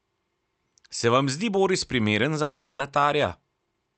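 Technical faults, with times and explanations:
2.42–2.90 s, long network dropout: packets likely stopped arriving, so the receiver stretched the last sound into a fading buzz or hiss lasting about 0.38 s. About 0.3 s of the speech is never played, and it resumes further on with that stretch missing.
3.42–3.91 s, jitter buffer speed-up: the buffer held more audio than its target, so it cut short pitch-period slices again and again, removing around 70 ms in total. The speech plays at 112% speed with its pitch unchanged and sounds hurried.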